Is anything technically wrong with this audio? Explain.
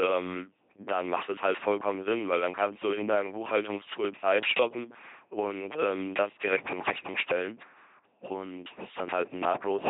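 Yes. Throughout the speech, the voice is a buzzing, mechanical robot sound, with harsh buzz or breathy hiss appearing wherever the coder misjudges voicing, and nothing reaches above about 3.8 kHz. This is heavy LPC-10 vocoder damage. Each moment is rebuilt by pushing either a pulse train or noise through a ten-pole vocal tract filter, so all natural texture is lost. The coarseness fits a 2.4 kbit/s rate.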